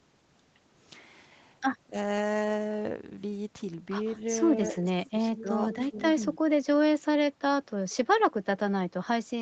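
A speech recording from a call, with four short dips in level that sound like speech suppressed in double talk, at 1.83–1.96 s, 4.56–5.5 s, 5.9–5.96 s and 6.31–6.37 s. The level falls by roughly 20 dB in the first two and about 10 dB in the last two, with the longest stretch losing around 400 ms of signal in pieces. The likely cause is an echo canceller that treats overlapping talk as echo and turns the near voice down. On a waveform these show as sudden notches in the envelope. On a spectrogram they appear as faded vertical bands. From 5.36 to 6.03 s an echo leak adds a faint delayed copy of the voice, trailing about 179 ms behind and sitting roughly 15 dB below it. This is likely residual loudspeaker pickup that the far end's canceller failed to remove. A spectrogram shows it as a dimmer ghost of the harmonic pattern, shifted right by that delay and overlapping the suppressed region. 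Across the whole clip the spectrum stops at 8 kHz, which fits a wideband Opus call path.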